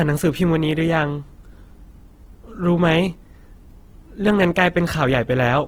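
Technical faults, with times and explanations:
Throughout, Opus compression: the speech sounds rough and grainy, with noisy texture, likely from Opus music-mode coding at a low rate near 16 kbps, noise-filling starved bands.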